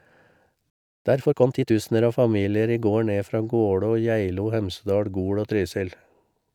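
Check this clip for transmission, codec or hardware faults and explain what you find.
Two playback faults occur early in the speech, one straight after the other.

At 0.70 s a playback stall cuts the speech off mid-flow for about 0.35 s of silence, until 1.05 s. The likely cause is the player running short of buffered data or its output thread being blocked.

From 1.05 to 1.75 s, time-compressed catch-up follows as the player trims its backlog by removing short slices and cross-fading the joins. The speech runs hurried, at 1.5 times normal speed, with pitch unchanged.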